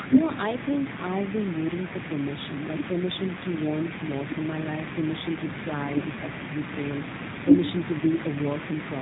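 Throughout, the speech sounds slightly rough and synthetic, with a plainly audible buzzy edge and nothing above 4 kHz, the damage of the G.729 codec. Each 10 ms frame is rebuilt from a vocal tract filter, a pitch predictor and a few pulses, consistent with an 8 kbit/s stream.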